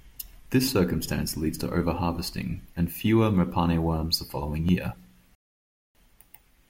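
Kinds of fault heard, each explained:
Periodic USB or driver dropouts: something blocks the audio path every 2.0 s, so a sliver of roughly a millisecond of speech is skipped each time, about three times from 0.68 to 4.69 s. Each gap is heard as a small regular tick over the speech.
Rebuffering stall: the player runs out of buffered audio at 5.35 s and goes silent until more data arrives, resuming at 5.95 s exactly where it stopped. Nothing is lost, but the pause adds 0.6 s to playback.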